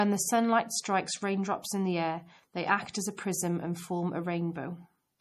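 MP3 compression, throughout: the treble stops at 15 kHz and the speech sounds watery and swirly, likely from MP3 encoding at a low bitrate around 40 kbps.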